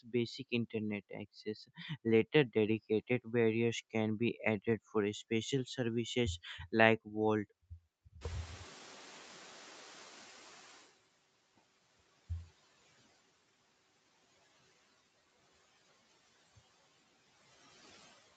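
Right at the start, from 0.03 to 0.14 s, there's speech cut by the noise suppressor: it mistakes the opening sound for noise and pulls it down by up to about 17 dB for roughly a tenth of a second, so the onset comes out swallowed and faint.

Around 8 s the room noise jumps by about 19 dB, and from 8.21 to 10.92 s you hear the noise suppressor catching up. Its noise estimate lags, so the louder background leaks through at first, then sinks over about 2.7 s as the roughly 15 dB of reduction kicks back in.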